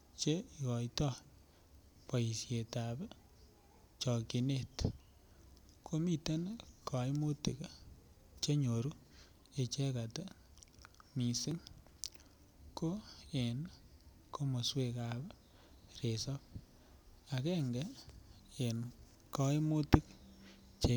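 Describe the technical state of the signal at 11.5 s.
At 11.51 s the speech jumps forward slightly with no gap of silence, as if a sliver of it was snipped out and the two edges butted together. This is likely a dropped buffer (overrun): the recording software failed to collect a block of samples before the hardware overwrote it, so about 5 ms of audio is missing and the surrounding sound joins abruptly at that point.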